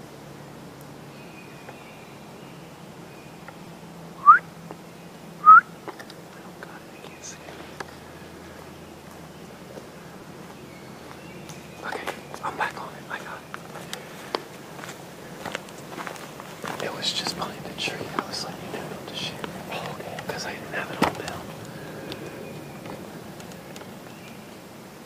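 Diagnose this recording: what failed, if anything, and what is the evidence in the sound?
Repeated buffer at 3.65 s and 10.21 s: a driver-stage underrun replayed a block that fits a 5 ms buffer three, then two, extra times, heard as brief buzzy clicks.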